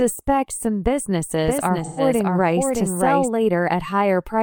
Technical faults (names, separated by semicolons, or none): doubled audio track; AAC frame loss with concealment